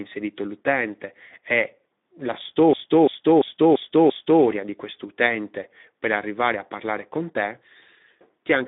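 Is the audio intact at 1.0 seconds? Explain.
No. Speex codec damage spans the clip: a 150 Hz to 3.7 kHz band and starved CELP excitation, fitting about 11 kbps, leave speech hoarse and noisy.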